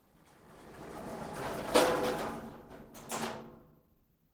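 Clock drift between sender and receiver runs throughout, with the sender's clock a few percent fast, so small cuts recur unevenly, seen as slight waveform discontinuities. From 3.71 to 4.28 s, repeated timing corrections push playback to 111% speed, giving a hurried, hiccupy passage with compressed spectrogram events and splice seams.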